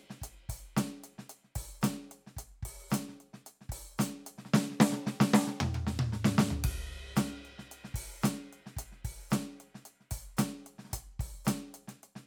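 Nothing stood out as a fault anywhere in this music on listening.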